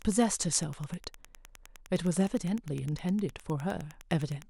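From start to finish there's Wi-Fi interference: a nearby radio's beacon, firing every 102.4 ms, gets rectified by the audio circuitry, so you hear a steady tick nearly ten times a second, sitting roughly 30 dB under the speech.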